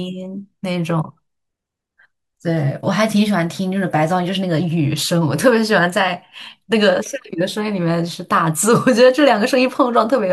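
Nothing in this recording stands out as a technical fault, since the speech runs along steadily from the first moment to the last without any break, glitch or disturbance catching the ear.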